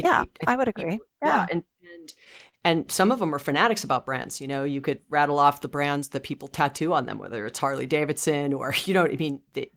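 A speech clip with a patch of repeated stalls (stutter) from 1.77 to 2.55 s: seven brief hangs, the longest about 41 ms, where late packets drained the jitter buffer and the receiver stretched the last sound. Nothing's lost, but that stretch drags.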